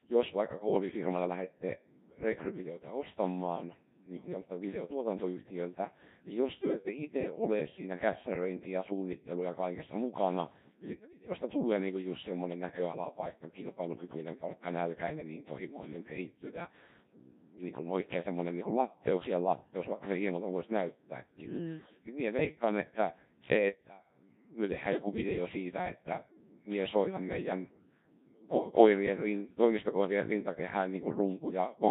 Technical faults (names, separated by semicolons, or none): Codec 2 vocoder